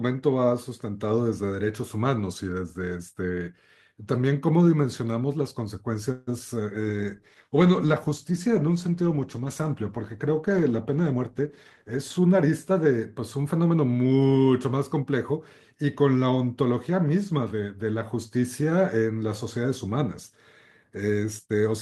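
A speech clip with four call-path faults clustered after the six-second mark. From 6.11 to 6.29 s the sound stalls for about 157 ms: the last sound is stretched into a fading buzz or hiss, then the speech resumes where it left off with nothing lost. This is most likely a call audio freeze, with delayed packets draining the jitter buffer. On a spectrogram it shows as smeared horizontal bands decaying across the gap. Shortly after, at 6.39 to 6.42 s, a short concealed packet loss drops about 20 ms of audio and patches it with a brief synthesized bridge. It sounds like a tiny smear or wobble, and the waveform shows a slightly misshapen cycle with the timing pulled a little earlier. From 6.81 to 12.24 s a call bitrate drop takes the encoder from 32 to 15 kbps, so the speech turns coarse and muffled. The spectrogram shows the upper frequencies cut away and grainier texture throughout that stretch. 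Overlapping it, from 11.12 to 13.54 s, a jitter buffer speed-up trims pitch-period-sized slices, roughly a fifth of a second in total. Speech runs about 7% faster at unchanged pitch and sounds slightly hurried, with compressed syllable spacing visible in the waveform.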